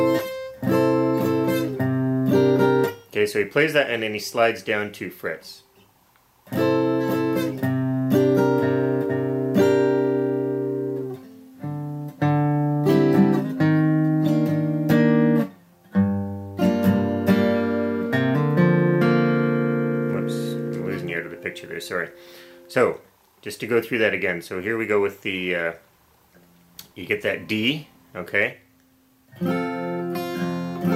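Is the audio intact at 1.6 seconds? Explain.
Yes, at 1.6 seconds the audio plays through cleanly, with no dropout, click, distortion or other fault to be heard at that point.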